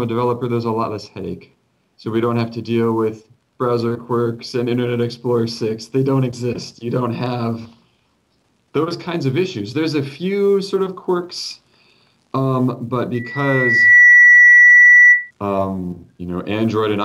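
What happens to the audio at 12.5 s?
Nothing goes wrong at 12.5 s; the audio carries on intact through that moment with no dropout, click, distortion or other fault.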